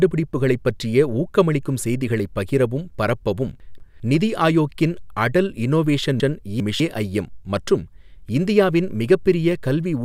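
From 3.6 to 4.0 s and again from 6.2 to 6.8 s, the speech has chunks out of order: 200 ms blocks play one and then two places late, jumbling the sound. Unlike a dropout, nothing goes missing.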